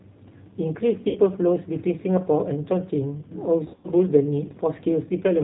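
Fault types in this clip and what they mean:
G.729 codec: the whole clip runs through this 8 kbit/s VoIP codec, which rebuilds speech from a vocal tract model and a few pulses per frame. Nothing above 4 kHz gets through, so the speech sounds dull, slightly rough and synthetic, and the damage is plainly audible.
VoIP packet loss concealed by the speech codec: packets went missing and the decoder filled in from its last pitch and filter, fading out as it went. Around 1.09 to 1.19 s about 60 ms is lost, and from 3.64 to 3.88 s some 160 ms is scattered over 200 ms, giving smeared, stretched sound that fades.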